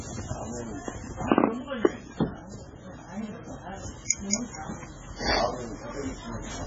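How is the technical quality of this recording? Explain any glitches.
Technical quality is poor. Throughout, nothing reaches above 7.6 kHz, with watery, swirling textures and smeared attacks, likely heavy MP3 compression at a very low bitrate, around 16 kbps.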